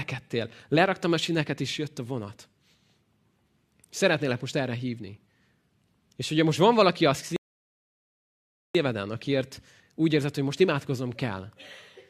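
At 7.36 s, right after "most van valaki az", the speech stops dead in a rebuffering stall, sitting silent until 8.75 s and then picking up with "akiért úgy érzed hogy". Unlike a dropout, nothing is skipped; playback simply paused about 1.38 s waiting for data.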